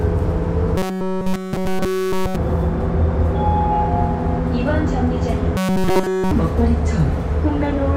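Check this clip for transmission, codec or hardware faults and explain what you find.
Two stretches are affected. Robotic sound from repeated short buffers appears at 0.78–2.36 s and 5.57–6.31 s: a rigid, metallic 188 Hz buzz replaces the sound almost entirely. This is likely a short segment of about 5.3 ms being looped while fresh audio fails to arrive.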